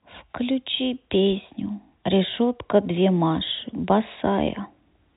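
Nothing stood out on listening to this speech recording.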